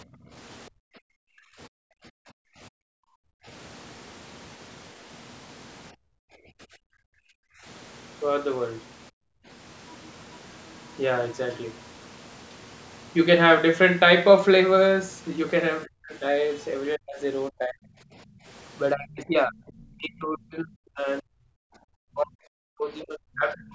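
A speech clip, band-limited with nothing above 8 kHz, in which the echo canceller repeatedly shows through. The background is gated by the echo canceller between 0.05 and 3.46 s, 5.93 and 7.65 s, 9.11 and 9.47 s, and 18.15 and 18.45 s. The room sound is pulled down by up to about 40 dB (about 24 dB in the last case) while far-end audio plays, then recovers when the suppression releases. The talker's speech is suppressed in double talk at 1.36 to 1.42 s, 15.84 to 17.87 s and from 18.94 s to the end. The voice dips by roughly 30 to 40 dB, in pieces covering about a second in the middle stretch and around four seconds at the end. The likely cause is the canceller failing to separate near-end speech from loudspeaker echo and attenuating both. At 23.0 s a brief scrap of the other side's voice leaks through about 25 dB below the talker, likely residual echo the canceller did not remove.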